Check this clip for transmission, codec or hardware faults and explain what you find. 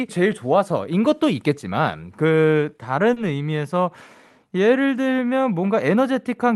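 One transmission fault appears, on speech carried over a call codec whose top end stops near 12 kHz, which points to Opus.

A short stall from a late packet occurs at 3.13 to 3.18 s. A packet arrived late and the jitter buffer ran dry, so the receiver stretched the preceding sound by 30 ms until it came, then resumed at the same point. Nothing is lost, but that moment is held too long and playback runs 30 ms later afterwards.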